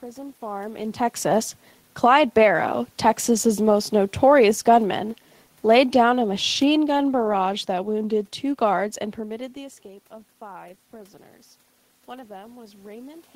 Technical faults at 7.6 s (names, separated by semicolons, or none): automatic gain falling